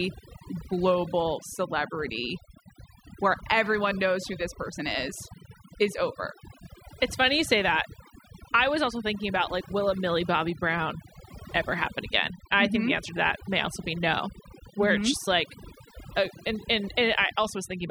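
From start to finish the speech carries overdone noise removal. A noise reduction stage was pushed too hard, so any frequency band sitting close to its noise estimate gets gated down or removed, taking the softer parts of the voice along with it. The pauses fall to near silence dotted with twinkling specks. A spectrogram shows scattered isolated dots across empty background and ragged, hollowed-out gaps inside the speech harmonics.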